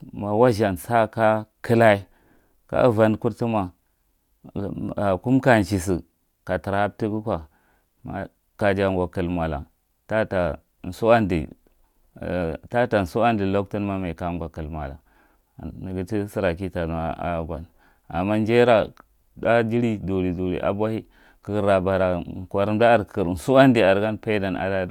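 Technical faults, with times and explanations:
No technical faults detected.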